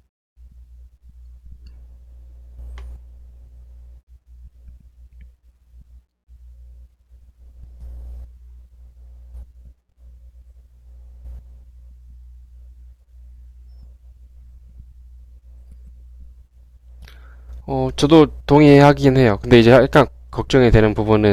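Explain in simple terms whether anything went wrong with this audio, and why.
Near the end, from 18.13 to 19.08 s and again from 19.53 to 20.01 s, the speech turns harsh and fuzzy. That is hard clipping: the sound got too loud to pass, so its peaks were chopped flat.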